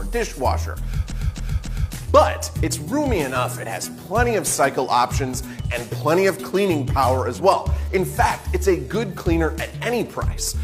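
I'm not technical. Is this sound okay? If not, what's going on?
No. A short run of compressed frames was sent or saved more than once (repeated frames), so the player replays the same 0.28-second chunk three extra times between 1.07 and 1.91 seconds. You hear a stutter, and the clip runs about 0.84 seconds longer.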